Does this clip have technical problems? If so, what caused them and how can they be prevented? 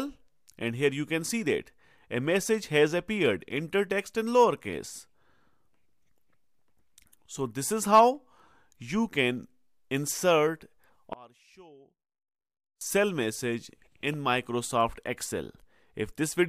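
Yes. From 11.13 to 12.81 s the sound collapses by about 27 dB, leaving only a faint residue before full level returns. The likely cause is one channel inverted: one stereo side flipped in polarity, so everything shared by both channels cancels in a mono sum. The waveform shows a sudden narrow band of low amplitude, and the spectrogram goes dim across that span. Checking polarity on each channel with a correlation meter before mixing to mono prevents this.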